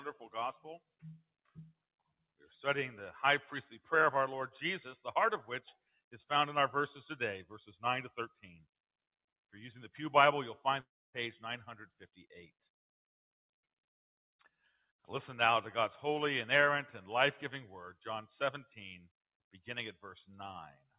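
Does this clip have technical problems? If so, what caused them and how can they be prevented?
Yes. Between 0.79 and 1.57 s, the sound is cut by the noise suppressor. It mistakes the sound for noise and pulls it down by up to about 22 dB, for about a fifth of a second in total. Raising the suppressor's threshold or lowering its strength prevents this.

From 10.8 to 11.15 s, the sound smears into a fading buzz, then drops to near silence for 250 ms. About 340 ms is lost. The likely cause is a long network dropout, with the receiver concealing the gap. A more stable connection and a larger jitter buffer prevent it.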